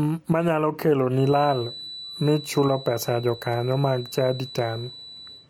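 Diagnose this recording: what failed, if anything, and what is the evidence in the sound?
From 1.1 s right through to the end of the speech, there's a thin, steady whistle at 4 kHz, sitting around 20 dB under the signal and slowly swelling and fading in level. That's a classic feedback whistle, most likely from the playback side: sound from a loudspeaker is leaking back into the microphone with the loop gain hovering right at the edge, so that single frequency keeps ringing without ever blowing up into a full howl.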